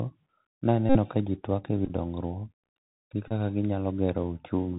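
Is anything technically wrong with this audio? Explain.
Yes. The speech has two faults: Bluetooth CVSD headset codec damage throughout, and three bursts of Bluetooth headset packet repetition.

The CVSD codec damage runs the full length. The audio is hard band-limited with nothing above 4 kHz, which fits a narrowband headset link. The codec sends one bit per sample saying only up or down, and its step size has to adapt. Fast, loud high-frequency content outruns the step. The result is plainly audible: s sounds are scratchy, loud passages are gritty and distorted, and a granular hiss sits under the speech.

Bluetooth headset packet repetition occurs at 0.89 to 0.98 s, 1.85 to 1.90 s, and 3.28 to 3.33 s. Packets were lost on the link, and each time the decoder replayed the previous packet's bits in place of the missing ones. The first event covers about 56 ms of lost audio. At a 3.75 ms repeat interval it produces a steady buzz near 267 Hz. 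The third, about 26 ms, buzzes more briefly. The second is scattered over 45 ms in short runs, the longest roughly 10 ms, so it sounds like a cluster of ticks and brief buzzes.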